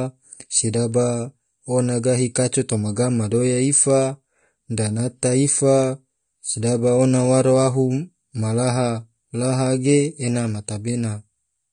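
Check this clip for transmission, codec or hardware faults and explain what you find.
One codec fault runs through the whole recording. AAC compression damage is plainly audible from start to finish, likely from AAC-LC at a bitrate around 32 kbps. Spectral detail is quantised away, so speech sounds dull and smeared, with a fizzy, warbling edge on sibilants. A spectrogram shows a hard ceiling near 9.7 kHz.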